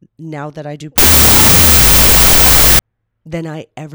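After "now that I do", from 0.98 to 2.79 s, the audio turns into loud, harsh noise with the speech faintly buried beneath it, slowed to half speed and dropped in pitch, until "than I" returns cleanly. This is a wrong sample width fault: the sound fits 32-bit float data being read as 16-bit integers, so each sample is split into two values built from mismatched bytes. The half-speed slowdown distinguishes it from a byte-order error, which adds noise but keeps the original timing.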